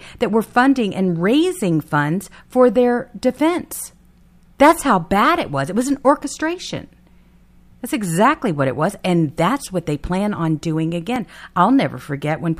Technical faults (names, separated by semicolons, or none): dropped buffer (overrun)